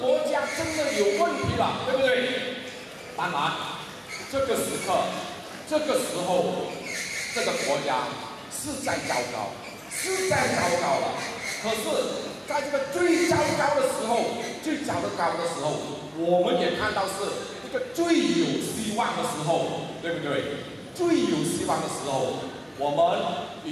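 No technical faults can be heard anywhere in this clip.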